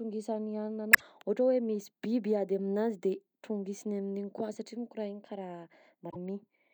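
At 0.90 to 1.02 s, just before "ohatra hoe", and again at 6.07 to 6.16 s, damaged data in the compressed stream causes short glitches. The decoder misreads corrupted frames, loses sync and hunts for the next valid header.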